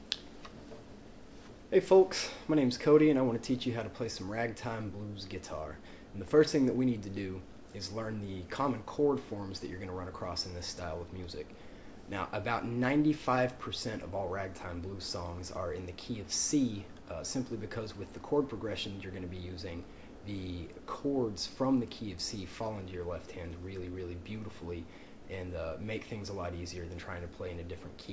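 No technical faults turn up anywhere in the recording. Nothing in it calls for a timestamp or a fix.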